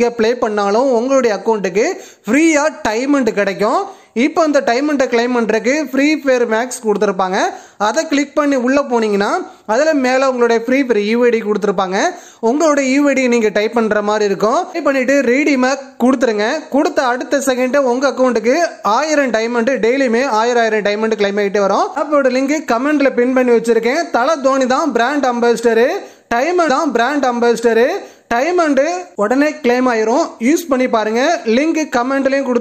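At 26.68 s the player fetched or queued the same stream segment twice, so the audio jumps back with a small blip and replays about 2.0 s of sound, up to 28.68 s, a stream segment repeated that lengthens the clip accordingly.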